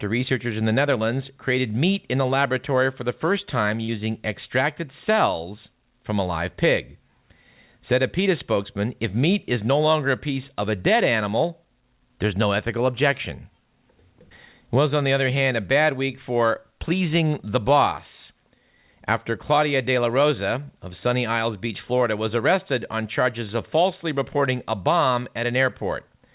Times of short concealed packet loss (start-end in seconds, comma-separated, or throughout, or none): 3.84-3.90